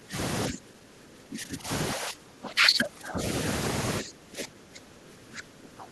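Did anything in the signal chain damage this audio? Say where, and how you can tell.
Yes. Call processing: speech suppressed in double talk. Speech drops about 20 to 25 dB at 0–0.16, 0.49–1.7, 1.94–3.2 and 4.01 s onward. An echo canceller likely ducked overlapping talk.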